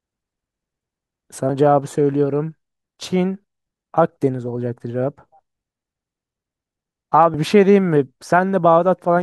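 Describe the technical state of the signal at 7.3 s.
At 7.34 s there is a short skip in the speech, most likely audio missing between chunks. Roughly 50 ms of sound is gone, and the two sides are butted together with no silence between them. That pattern fits processing in 2.0 s chunks, where a piece is dropped as one chunk closes and the next opens. On the waveform this shows as a sudden jump in shape rather than a flat gap. On a spectrogram, the harmonic lines break off and resume at a hard vertical edge.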